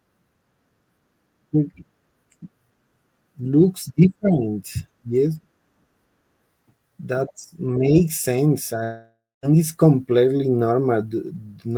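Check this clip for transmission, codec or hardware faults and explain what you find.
There is one fault: a long network dropout from 8.83 to 9.46 s, just before "it's completely". The sound breaks off into a fading buzz, then goes silent for about 0.22 s. Around 0.6 s of audio is simply gone. The likely cause is packets that never arrived, which the receiver covered by stretching out the last sound it had.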